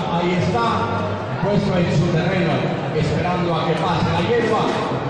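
No technical faults are audible.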